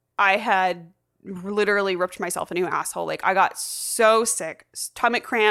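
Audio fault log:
Nothing to log here, as this speech comes through without a single fault worth noting.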